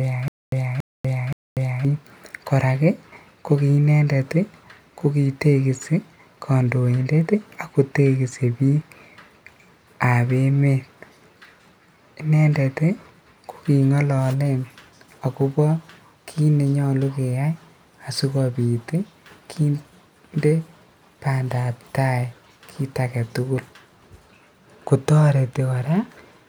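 Until 1.85 s, a stutter with silent gaps: a 0.28 s burst repeats three times between 0.24 s silences, unlike a seamless loop, likely from a stalled stream.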